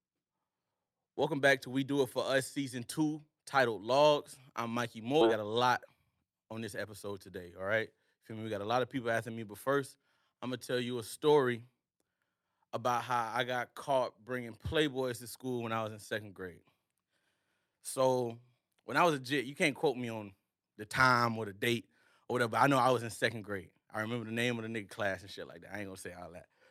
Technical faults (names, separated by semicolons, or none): skip ahead; jitter buffer speed-up